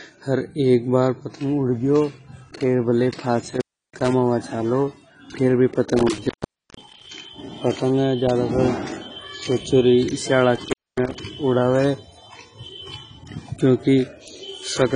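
It's a speech clip, and the whole thing sounds dull and smeared. Nothing comes through above about 10.3 kHz, and there's a warbly, fizzy texture on the sibilants and held sounds that's plainly audible. That points to likely AAC compression, and AAC-LC at a low rate around 24 kbps would fit. The encoder throws away the top end and coarsely quantises what's left, so fine detail gets traded for that swimmy artefact. On top of that there's an intermittent contact problem, like a loose cable or plug briefly opening. The sound breaks up three times: 3.42 to 4.13 s, 5.99 to 7.08 s, and 10.55 to 11.15 s. Inside those stretches the line goes open for about 0.32 s, 0.48 s and 0.24 s respectively. It drops out with crackle where the contact makes and breaks, then comes back when it reseats.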